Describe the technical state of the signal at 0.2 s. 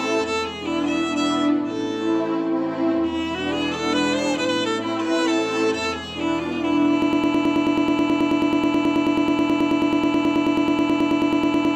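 At 0.2 s the signal is intact, with no audible dropout, distortion, clipping or other fault at that point.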